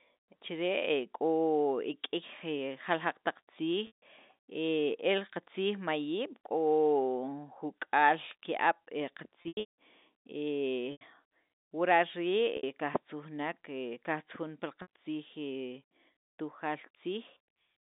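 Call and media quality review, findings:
Packet loss with pitch repetition, speech, five gaps: 3.87–4.02 s (150 ms), 9.42–9.73 s (300 ms scattered over 360 ms, longest run 180 ms), 10.92–11.01 s (90 ms), 12.57–12.63 s (60 ms, just before "qajtzujunek qajtzujun pi"), 14.82–14.87 s (60 ms). Gap sizes fit 30 ms packets. The receiver's concealment loops the last pitch period, heard as a held buzzy tone. The longest runs fade toward silence. On a spectrogram, flat harmonic stripes that decay. On the waveform, a repeating periodic cycle. The G.711 telephone coding band, 200 Hz–3.7 kHz, is visible around these gaps.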